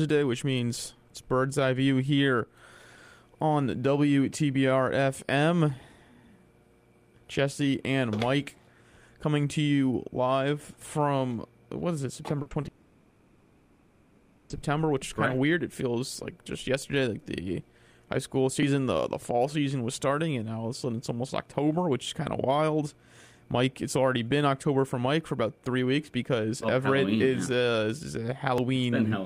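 Repeated packet loss (robotic sound) runs from 12.42 to 12.68 s. Four short holes, the longest 40 ms, open in quick succession. Each one is covered by stretching the sound that came just before it. Together they patch 80 ms, nearly a third of that quarter-second. The audio turns choppy, with small pieces missing.

A long network dropout follows directly, from 12.68 to 14.51 s. For about 1.8 s the sound never drops to silence. Instead, a continued, smeared imitation of the last audio fills the whole stretch, and the real material comes back only at 14.51 s. This is likely a run of late or lost packets that the receiver kept concealing rather than leaving empty.

Audio missing between chunks shows up as abrupt skips at 18.63 s and at 28.58 s, about 10 s apart. Each skip drops roughly 40 ms, and the audio on either side is butted together with no pause. The regular spacing points to a recorder or processor working in 10-second blocks that likely loses a sliver of audio each time it hands one block over to the next.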